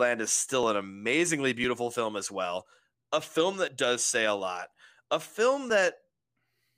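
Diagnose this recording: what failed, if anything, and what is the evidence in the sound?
Periodic USB or driver dropouts at the driver or buffer stage. Around seven clicks repeat every 1.01 s from 0.63 s to 6.71 s, each losing roughly 10 ms of speech that is skipped, not silenced. A spectrogram shows thin, evenly spaced broadband vertical lines, and the waveform shows abrupt splice discontinuities.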